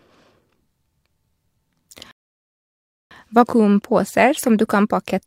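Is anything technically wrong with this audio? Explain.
Yes. From 2.11 s to 3.11 s the speech stops dead into silence: a rebuffering stall. Playback ran out of downloaded audio and waited for more, adding 1.0 s. Unlike a dropout, nothing is skipped; the speech resumes exactly where it halted.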